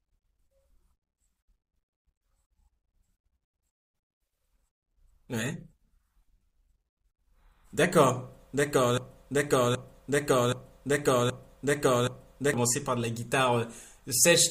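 From 8.98 s to 12.54 s the speech falls into a broken-record loop: one 774 ms fragment repeats five times back to back, likely from a stalled player or stream resending its last buffer. The waveform and spectrogram show identical blocks tiling, and the intervening speech is lost.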